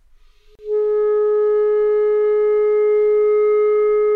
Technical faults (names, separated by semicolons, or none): gap at a join of encoded pieces